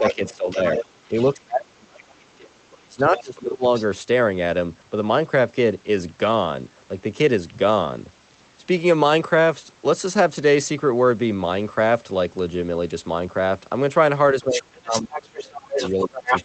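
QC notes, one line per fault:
0.00–3.64 s, speech suppressed in double talk: The talker drops in pieces for around two seconds in total, by about 35 dB at worst. This is likely the echo canceller muting both voices during overlap.
0.03–1.24 s, other side's voice leaking through: A second voice is audible about 10 dB below the talker. This is likely loudspeaker echo left behind by the canceller.
2.72–2.77 s, 3.17–3.40 s, 3.74–3.85 s, other side's voice leaking through: Brief scraps of a second voice come through about 20 to 35 dB down. This is likely residual echo escaping suppression.
14.34 s to end, speech suppressed in double talk: The talker sinks by up to about 25 dB. This is likely the canceller clamping down while both sides speak.
14.41 s to end, other side's voice leaking through: A strong second voice sits only about 5 dB under the talker. This is likely poorly cancelled loudspeaker echo.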